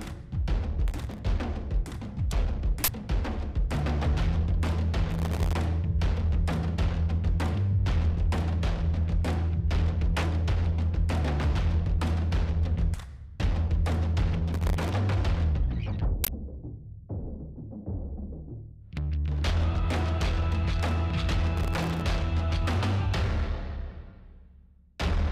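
Processor overload crackle appears at 0.88–1.19 s. The processor misses many buffer deadlines in a row. Each miss leaves a tiny silent gap, and together the gaps crackle. A 40 ms uninitialised buffer follows at 2.84–2.88 s. Leftover memory is played as samples, giving a brief, loud burst of digital noise. The crackle returns at 5.11–5.53 s and 14.53–14.89 s. A second uninitialised buffer hits at 16.24–16.28 s. The last crackle is at 21.57–22.02 s. The gaps are very short, which fits buffers under a millisecond.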